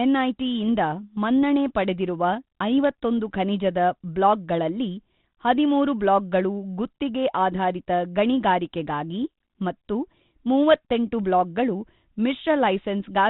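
Nothing goes wrong anywhere in this speech, which simply carries the narrow, faintly grainy telephone-band character you'd expect from G.726 ADPCM at 32 kbit/s.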